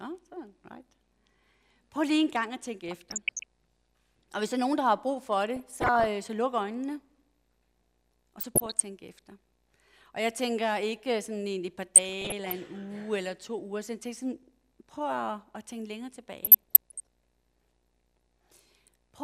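Five bursts of DAB burbling break through, at 2.86–3.44 s, 5.56–6.06 s, 8.39–8.81 s, 11.96–12.52 s and 16.44–17.07 s, each around half a second. It's a burble of short noise blips over the programme. Reception was weak enough that bit errors, a fraction of a percent, slipped past error correction into the MP2 data, so wrong samples put short blips of noise in single sub-bands.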